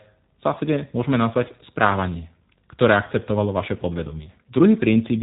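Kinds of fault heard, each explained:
G.729 codec, throughout: the speech is resynthesised from a vocal-tract model and sparse pulses, sounding plainly rough and synthetic, with nothing above 3.8 kHz.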